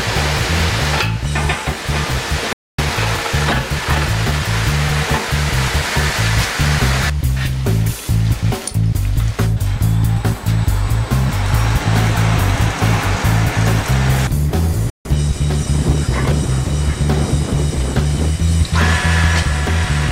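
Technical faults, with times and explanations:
2.53 to 2.79 s, playback stall: the sound cuts to silence for about 0.25 s mid-flow, then resumes. The player likely ran short of data or had its output thread blocked.
2.79 to 4.47 s, time-compressed catch-up: the sound runs about 1.15 times faster at unchanged pitch while the player works off the backlog from the stall. Small slices are removed and cross-faded. A speed-up would raise the pitch, and this does not.
14.90 to 15.05 s, playback stall: a shorter silence of about 0.15 s interrupts the sound, which then continues. This is likely another brief starvation or blocked thread in the player.
15.05 to 16.53 s, time-compressed catch-up: a gentler hurry at about 1.1 times normal speed, with pitch unchanged as small pieces are cut out and cross-faded. It eases back to normal pace once the backlog is cleared.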